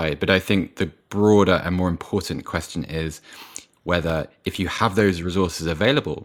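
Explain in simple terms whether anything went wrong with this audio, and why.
CD scratch ticks: from 4.10 to 5.68 s, eight tiny ticks, each only a few milliseconds long, repeat evenly at about five a second as the disc turns, unlike random clicks.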